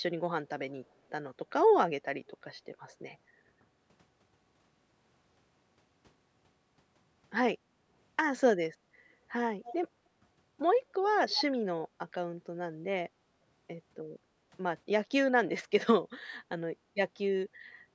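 At 2.34 to 2.45 s and again at 7.69 to 7.9 s, the background is gated by the echo canceller. The room tone ducks by about 10 dB and then about 20 dB, for roughly a tenth and a fifth of a second, then comes back. Unlike a network dropout, the signal never goes fully silent. Only the ambient bed sinks, because the canceller clamped the microphone while the loudspeaker was playing.

From 9.65 to 9.89 s a faint, separate copy of the speech trails the original by 244 ms, sitting about 15 dB lower. It is likely an echo leak, where the far side's canceller let loudspeaker pickup return down the line. Room reverberation would give a smooth decaying tail, but here the copy is a distinct, late repeat.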